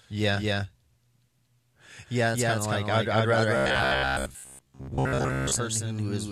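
Throughout, the speech carries a doubled audio track: a second, equally loud full-band copy trails about a fifth of a second behind, likely from a slower second capture path. Unlike room echo, it has no decay or added colour. From 3.57 to 5.56 s, just after "like I'd I'd rather", robotic sound from repeated short buffers sets in. Most of the audio there is a looped sliver, which fits 15 ms buffers, likely arriving too seldom. That imposes a rigid 66.8 Hz metallic buzz, which, unlike mains hum, still roughly tracks the words.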